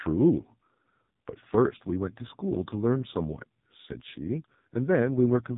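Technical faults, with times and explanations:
Throughout, AMR narrowband mobile codec: the speech sounds heavily buzzy and synthetic, thin and boxed-in, with nothing above about 3.8 kHz. This is AMR-NB at a low rate, which fits 5.15 kbps. The codec samples at 8 kHz and rebuilds the voice from a vocal-tract model excited by a handful of pulses every 5 ms. At so few bits that excitation is coarse, which gives the rasping, artificial edge, and the upper band is simply gone.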